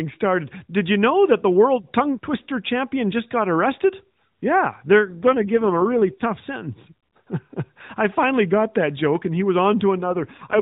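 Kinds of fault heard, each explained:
AMR rate drop: at 5.04–6.22 s and from 10.04 s after "he was", the speech turns rougher and more synthetic without gaps, which fits the codec switching from 12.2 to 4.75 kbps.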